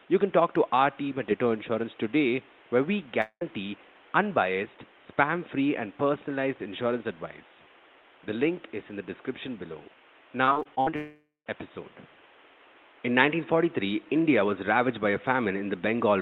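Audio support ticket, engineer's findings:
Long network dropout, 3.21–3.43 s, right after "today where we": sound cuts out, the last bit stretches into a fading buzz for roughly 0.2 s, then about 70 ms of near-silence before it picks up with a chunk gone. Likely a receive-side gap with jitter-buffer concealment papering over it.

Second long network dropout, 10.96–11.48 s: same pattern but longer. About half a second stretched and fading, around 170 ms of dead air, audio resumes minus the missing piece.

Repeated packet loss (robotic sound), 10.45–10.94 s, straight after "in the description below": seven short holes, longest about 54 ms, each patched by repeating the last sound, so roughly a third of that half-second is fill. The result is choppy. The network is dropping or delaying packets back to back, and it rolls right into the second dropout. Room noise sits about 29 dB under the speech.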